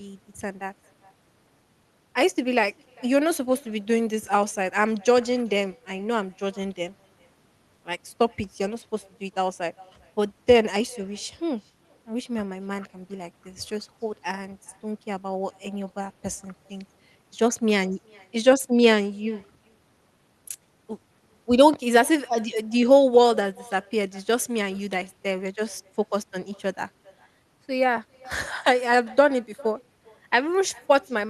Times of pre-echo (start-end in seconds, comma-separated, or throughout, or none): none